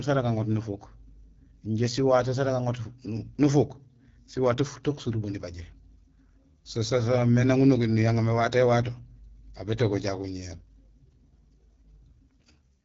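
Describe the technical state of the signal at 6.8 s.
At 6.8 s the speech sounds rough and raspy, with a hard ceiling on brightness: nothing reaches above 7.1 kHz, and the topmost band has a hissy, synthetic quality. This is AMR wideband (HD Voice) codec damage, present throughout the clip. The codec rebuilds speech below 6.4 kHz from a pulse-excited vocal tract model and fills the band above with shaped noise. The plainly audible coarseness fits one of its lowest modes, around 8.85 kbit/s.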